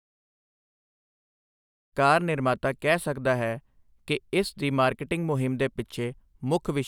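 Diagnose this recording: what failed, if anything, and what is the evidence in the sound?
Nothing in this speech recording points to a failure at any stage of the chain. The level rises smoothly at the opening in an even, edited fade-in lasting about two seconds, with no click or hard edge where it begins.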